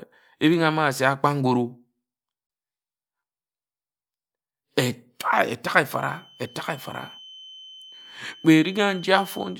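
At 2.47 s the speech drops out abruptly, leaving a silence of about 25 ms that lasts until 2.50 s. The edges are smeared by the codec, and then the speech resumes exactly where it broke off. This is a gap at a join of encoded pieces. Sections were encoded separately, about 10 s apart, and joined without trimming. The encoder's start-up silence and the padding on the last frame of the earlier piece both stayed in.

From 5.85 s to the end of the clip a thin, steady whistle at 3.1 kHz sits behind the speech, roughly 25 dB below it, and swells and fades slowly in level. This is a feedback whistle. The likely cause is a loudspeaker-to-microphone loop held just at the edge of feedback, so one high frequency keeps ringing without building into a runaway howl.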